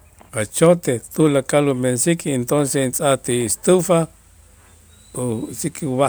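Listening to this speech recording, nothing stands out as a technical problem.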